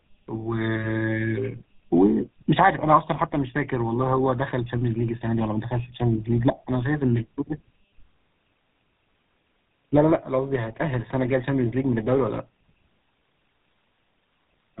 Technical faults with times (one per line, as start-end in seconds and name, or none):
0.00-14.80 tandem speech coding